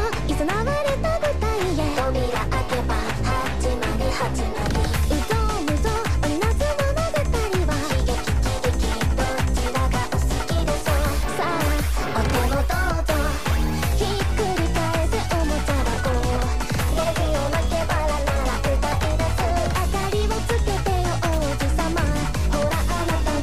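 No technical faults can be heard anywhere in the audio.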